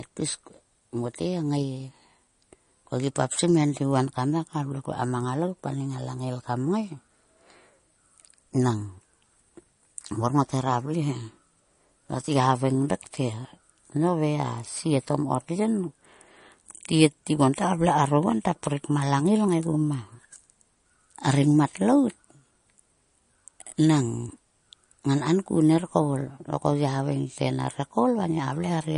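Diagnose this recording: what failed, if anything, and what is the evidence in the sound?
The codec stage failed: the speech was likely squeezed through MP3 compression at a low bitrate, and the sound fits something near 40 kbps. Throughout the clip there is nothing above 10.6 kHz, the hard treble ceiling an encoder imposes when bits run short. The damage is plainly audible: weak frequency lines drop in and out between frames, giving a watery, swirling texture, metallic chirps on s sounds, and smeared consonant attacks.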